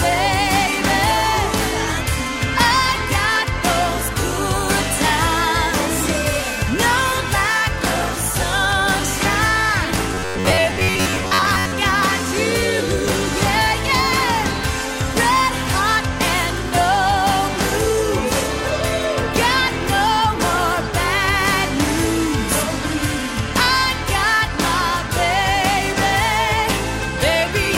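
From 10.14 to 11.76 s, new audio likely reached the playback software too slowly, so it padded the gaps by replaying its last short buffer over and over while the real material in between was dropped. For most of that stretch the sound becomes robotic sound from repeated short buffers: a stiff, metallic buzz locked near 94 Hz, which points to a buffer of roughly 10.7 ms, with the underlying audio only loosely traced beneath it.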